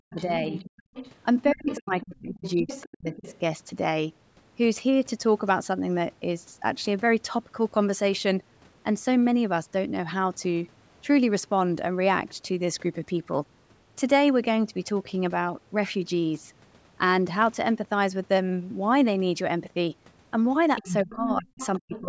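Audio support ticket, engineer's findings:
Speech suppressed in double talk: talker's speech dips hard or breaks into pieces at 0.0–0.53 s, 1.53–3.18 s and 20.81–22.08 s, drops of roughly 30 to 40 dB. Likely the echo canceller treating overlapping talk as echo and attenuating both.

Other side's voice leaking through: a second, fainter voice audible under the talker at 0.16–3.39 s (about 15 dB down) and 20.76–22.01 s (about 10 dB down). Residual loudspeaker echo the canceller likely failed to subtract from the mic.

Background gated by the echo canceller: room sound briefly drops out at 0.82–0.94 s, about 31 dB deep for roughly a tenth of a second, then returns. The canceller clamped the mic while the loudspeaker played, then released it.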